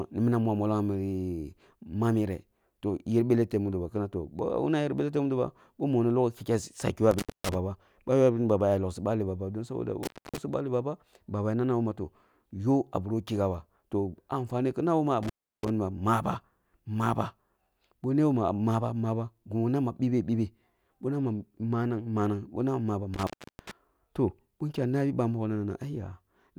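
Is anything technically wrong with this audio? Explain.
Yes. The speech has an intermittent contact fault. It appears at 7.11–7.55, 10.03–10.38, 15.23–15.70 and 23.14–23.71 seconds. A loose cable or plug briefly breaks the signal path. The audio drops out for about 230 to 340 ms each time, with crackle at both edges.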